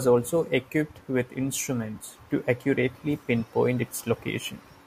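No technical faults are audible in this speech.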